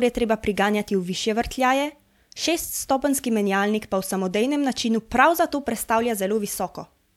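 No technical faults are audible.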